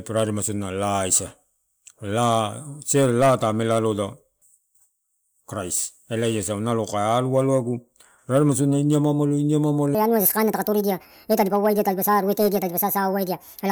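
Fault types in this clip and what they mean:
Section at the wrong speed: from 9.95 s, right after "sodiua ini amaamalo iniamaamalo", to the end of the clip at 13.71 s, the speech runs 1.52 times too fast. Because speed and pitch are tied together, the voice jumps up by roughly seven semitones and sounds hurried and chipmunk-like. This is likely a playback or editing stage clocking that stretch of audio at the wrong rate, so samples are consumed faster than they were recorded.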